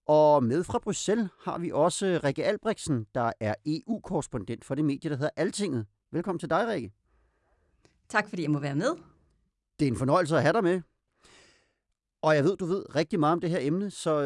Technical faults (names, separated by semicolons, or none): none